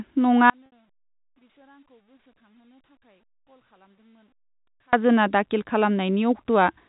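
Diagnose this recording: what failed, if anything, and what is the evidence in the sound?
An audio dropout to a faint residue runs from 0.50 to 4.93 s. Speech cuts abruptly to a faint leak about 40 dB down, likely an analogue wiring break.

Packet loss with pitch repetition occurs at 0.66 to 0.72 s in the network. About 60 ms went missing, fitting two packets, bridged by a repeated pitch period faded out over about 50 ms.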